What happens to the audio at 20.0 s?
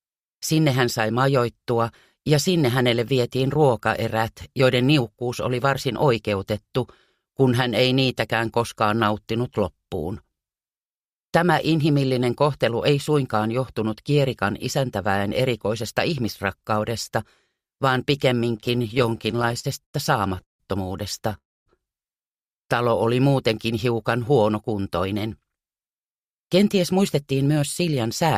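At 20.0 s the audio is inside a run of repeated stalls (stutter), from 18.57 to 20.62 s. The jitter buffer kept running dry, so 24 holds, the longest 157 ms, stretch the last sound. Unlike dropouts, nothing is lost. It drags and stutters.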